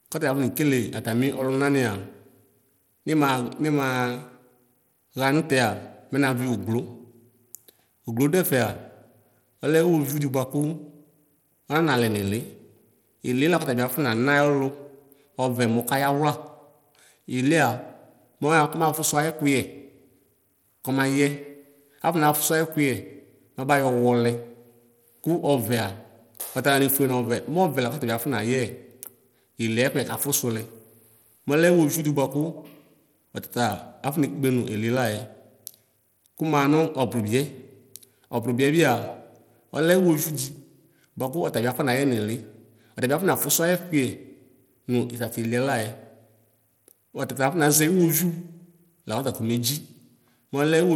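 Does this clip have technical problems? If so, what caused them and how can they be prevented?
Yes. Throughout, the treble flickers and a gritty noise rides on the speech. This is likely Bluetooth SBC compression, consistent with a starved bit pool near 96 kbps. Prevent it by recording over a wired connection or using a higher-quality codec.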